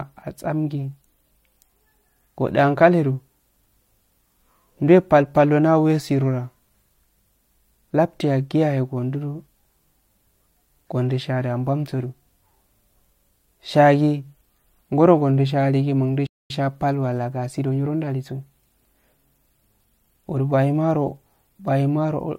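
Speech here, with two problems. From 2.28 to 14.28 s it's an adaptive stream at a lower bitrate: the treble suddenly turns thin, with nothing above 16.3 kHz, which fits a switch down to a low-rate HE-AAC version. Then, right after "aligi mundu", there's a playback stall, silent from 16.26 to 16.50 s (about 235 ms), likely the player running short of data.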